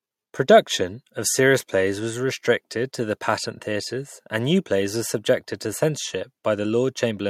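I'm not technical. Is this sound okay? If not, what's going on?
Yes, it sounds fine; nothing stood out as a problem when listening to it.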